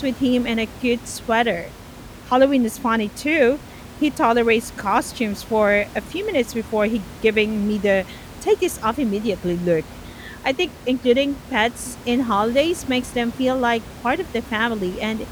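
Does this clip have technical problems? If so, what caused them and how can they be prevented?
No, there is nothing to fix or prevent here; the only thing under the speech is the room's own background noise, about 18 dB below it, which belongs to the recording space rather than the system.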